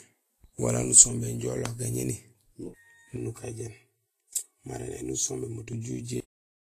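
Across the whole clip the speech carries plainly audible codec damage, likely from Vorbis compression at a low bitrate, which fits a rate near 28 kbps. The treble is coarsely quantised into grainy hiss, and a spectrogram shows nothing above 14.2 kHz and smeared, noisy upper bands.

From 3.17 to 5.73 s a channel delay of about 3 ms, summed to mono, causes comb filtering. Shared content cancels at evenly spaced frequencies starting near 200 Hz, giving a hollow, phasey tone. A spectrogram shows fixed horizontal notch stripes through this stretch.

At 6.20 s there is a cut-off end. The final buffers were never written, so the speech stops mid-sound with no natural decay. The waveform ends abruptly at full activity and then flatlines for the remaining half second.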